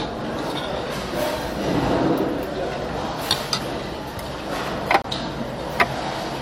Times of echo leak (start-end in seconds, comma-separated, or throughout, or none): none